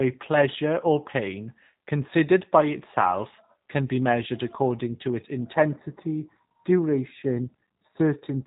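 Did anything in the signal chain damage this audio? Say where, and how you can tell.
Yes. At the codec stage, G.729 compression runs through the whole clip. Nothing passes above 3.8 kHz, and the speech sounds rough and synthetic, which fits 8 kbit/s.

From 5.54 s, just after "measured according to its", channel delay causes comb filtering until the end. One channel arrives a fraction of a millisecond late. Summing to mono cuts a notch near 3 kHz, making the sound hollow.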